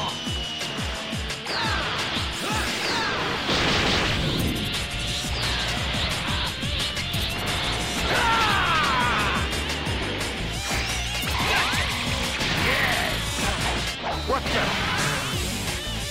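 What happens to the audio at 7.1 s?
Loose connector crackle runs from 7.09 to 7.34 s. A worn contact rapidly makes and breaks, chopping the signal into an irregular scratchy burst, seen as a chopped waveform with scattered broadband vertical streaks on a spectrogram.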